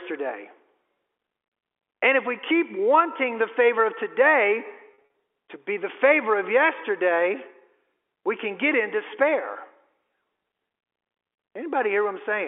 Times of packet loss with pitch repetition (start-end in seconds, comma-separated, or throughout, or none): 4.94-5.14